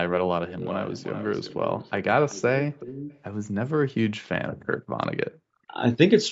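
From 0.46 to 2.04 s, at 2.29 to 2.42 s and from 2.62 to 3.18 s, an echo leak trails the speech by 380 ms. This faint copy, roughly 20 to 25 dB down, likely comes from an echo canceller missing loudspeaker pickup. Spectrograms show the harmonic striations repeated, shifted right.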